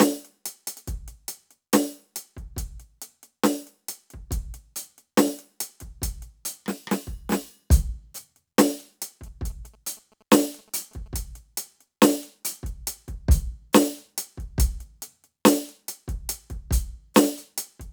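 Music, with GSM signalling bursts from 9.27 to 11.17 s: a galloping dit-dit-dit of short 217 Hz buzzes, about 30 dB down, from a nearby phone's rectified radio bursts.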